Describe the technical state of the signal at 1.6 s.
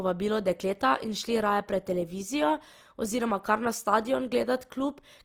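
At 1.6 s the signal is still under the Opus compression that spans the whole clip; the likely cause is an encoder running short of bits, in a way that fits its music (CELT) mode at a rate near 24 kbps with full bandwidth kept. Bands the bit budget cannot fill properly are patched with folded lower-band content or noise, so the speech here sounds plainly grainy and rough rather than hollow or swirling.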